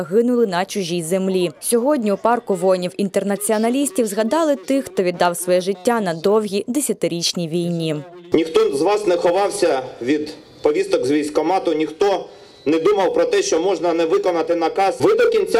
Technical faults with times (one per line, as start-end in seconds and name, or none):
0.00-15.59 resampler restarted on every block